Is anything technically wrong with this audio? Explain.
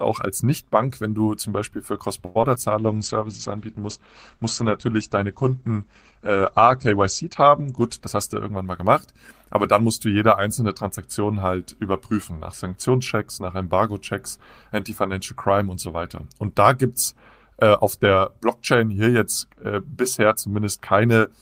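Yes. The speech has four kinds of transmission fault, all clustered in the first ten seconds.

From 2.25 to 2.37 s there is a short stall from a late packet. A packet arrived late, the jitter buffer ran dry, and the receiver stretched the last sound for 100 ms until the packet came in, then carried on from the same point. Nothing is lost, so the effect is a held, slightly buzzy sound rather than a gap, and the playback delay grows by 100 ms.

Just after, at 2.41 to 2.45 s and again at 2.55 to 2.58 s, there is short concealed packet loss. In each case 20 ms of audio never reached the decoder, and the receiver covered the hole by extending the preceding sound and then blending back. Unlike the stall, real audio is missing here. It comes across as a quick smear or wobble, and a brief consonant can drop out.

From 2.8 to 9.52 s a call bitrate drop takes the encoder from 32 kbps down to 11 kbps, staying at the lowest rate for about 4.2 s. 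The coded bandwidth falls from 20 kHz to 8 kHz, so the speech turns muffled and rough and watery. This degradation is continuous across several seconds, which separates it from the momentary concealment blips earlier.

From 7.99 to 9.75 s, overlapping the end of the low-bitrate stretch and leading into "musst du jede einzelne", a jitter buffer speed-up plays the speech at 105% speed. The buffer had built up excess audio, and the receiver trimmed it by cutting out short pitch-period pieces repeatedly, about a tenth of a second in total. Pitch stays the same, so this is heard as hurried timing rather than a change in timbre like the bitrate drop.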